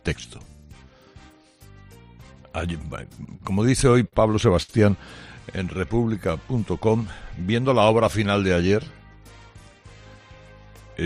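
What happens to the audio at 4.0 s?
Repeated stalls (stutter) run from 3.09 to 4.14 s, and 4.0 s falls inside them. Packets arrived late or slower than playback, so the jitter buffer kept running dry. Each time, the receiver stretched the last sound to cover the wait, seven brief hitches in all, the longest about 48 ms, together filling 110 ms or roughly a tenth of the span. Nothing is lost, but the audio drags and stutters through this stretch.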